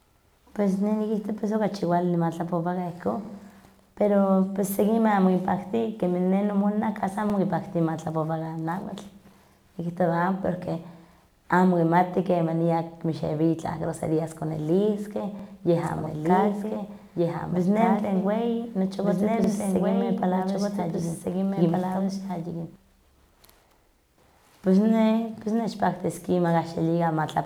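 Overlapping chunks produce brief stutters at 3.25, 7.30, 11.35, 15.39, 19.44 and 23.49 s. Each chunk join, about 4 s apart, replays 48 ms of speech. From 15.83 to 22.76 s a doubled audio track runs a full-band copy about 1.5 s behind and roughly 5 dB quieter. It starts and stops abruptly, with no decay or room colour to mark it as echo. The likely cause is a second, slower capture path.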